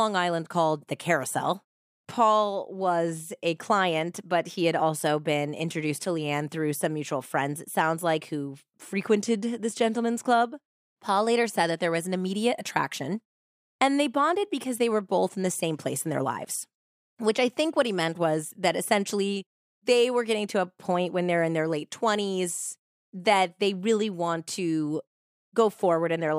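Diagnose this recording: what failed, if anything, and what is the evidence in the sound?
Nothing stood out on listening to this speech recording; no stage of the chain left any audible trace of a failure.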